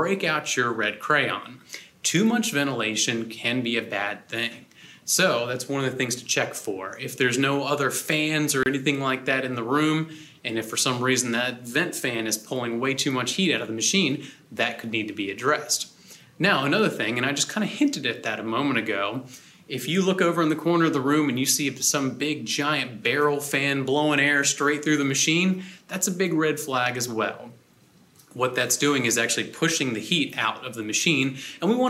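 The audio has a gap at a join of encoded pieces, from 8.63 to 8.66 s. Continuous sound breaks off in a gap of about 28 ms, then resumes where it stopped. The codec smears the gap's edges, so the truly silent part is shorter. Separately encoded segments were joined without trimming each encoder's start delay and end padding.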